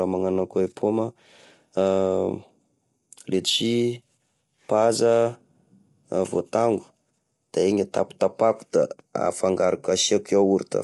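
Throughout, the speech sounds rough and grainy, with a hiss filling the gaps between harmonics and nothing above about 11.6 kHz. This likely comes from low-delay AAC compression at a bitrate consistent with 32 kbps, whose short frames resolve pitch poorly.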